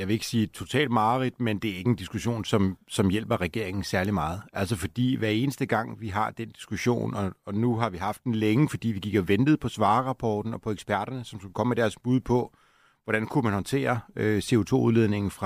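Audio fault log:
4.05 s, bit error spike: a single flipped bit in one sample, just after "som som hjælper regeringen", jumps the value to about -15 dBFS, giving one sharp broadband tick.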